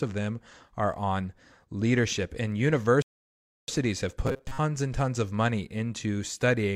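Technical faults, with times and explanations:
3.02–3.68 s, rebuffering stall: the speech drops to silence for about 0.66 s, then picks up exactly where it stopped, because playback ran out of downloaded audio.
4.27–4.58 s, robotic sound from repeated short buffers: a rigid metallic buzz near 133 Hz just before "and tons of money", likely from replaying roughly 7.5 ms snippets while most real audio was skipped.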